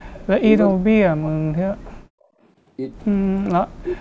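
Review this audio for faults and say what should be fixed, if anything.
An echo canceller likely mistook double talk for echo and turned the speech down by around 40 dB from 0.77 to 2.12 s and from 3.71 s to the end, causing speech suppressed in double talk. Better double-talk detection, which keeps adaptation and suppression gentle while both sides speak, would prevent it.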